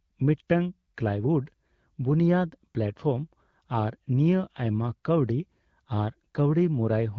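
No technical faults are audible.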